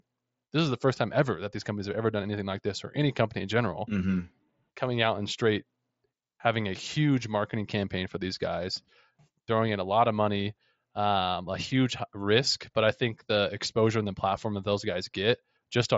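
Speech, with nothing technically wrong with it. It has passed through a Bluetooth mSBC headset codec, which leaves nothing above about 7.7 kHz and a faint graininess on louder sounds, consistent with mSBC's fixed rate of around 60 kbps.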